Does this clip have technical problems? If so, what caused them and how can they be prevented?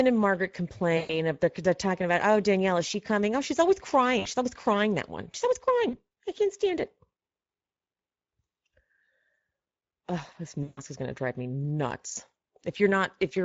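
Yes. Speex codec damage runs through the whole speech clip and is plainly audible. Speex is a CELP coder that models the voice as a filter driven by an excitation signal. At this setting, which sounds like a mid-range bitrate around 17 kbps, too few bits describe that excitation, so the speech comes out hoarse and grainy, and the upper band is a shaped noise-like fill. Sending at a higher Speex quality, or using a modern codec such as Opus, would prevent it.

VoIP packet loss concealed by the speech codec causes four dropouts. The first is at 0.97 to 1.19 s, about 120 ms of missing audio. The second is at 4.19 to 4.28 s, right after "she's always", about 60 ms. The third is at 5.89 to 5.96 s, just before "I can't stand it", about 40 ms. The fourth is at 10.63 to 10.82 s, just before "is going to drive", about 140 ms. In each gap the decoder repeated its last pitch and filter with falling gain, so the voice smears into a buzzy tone or coloured noise that fades, and stays weak briefly after the audio resumes. 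Forward error correction, a jitter buffer and a more reliable network path would prevent it.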